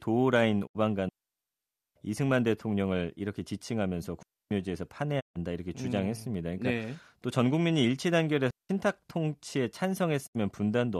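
At 0.65 s there's a digital broadcast dropout: the receiver mutes with a quick 20 ms fade and loses about 72 ms, which fits roughly three bad frames. It happens again at 5.19 s, losing about 144 ms, and at 10.25 s. Each time the speech sent during the gap simply isn't there.

Between these come digital wireless dropouts, at 1.09 to 1.96 s (nearly 0.87 s), 4.23 to 4.51 s, and 8.51 to 8.69 s. The link lost too much data, so the receiver cut to clean near-silence with no noise burst on either side.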